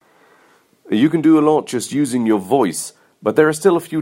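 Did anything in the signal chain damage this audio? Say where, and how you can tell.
No, nothing in the signal chain audibly damaged this speech recording. No stage leaves a mark on it.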